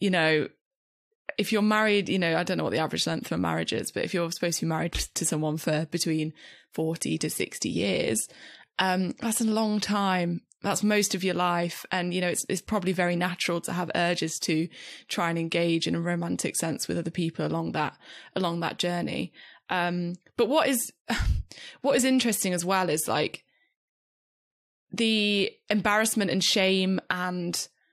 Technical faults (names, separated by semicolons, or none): none